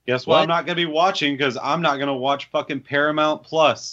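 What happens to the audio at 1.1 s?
Nothing goes wrong at 1.1 s; the speech carries on intact through that moment with no audible fault.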